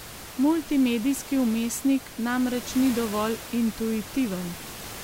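Nothing in the system is going wrong here; the speech comes across intact, with just the room's own background noise sitting about 15 dB underneath it, as you'd expect from any microphone in a real space.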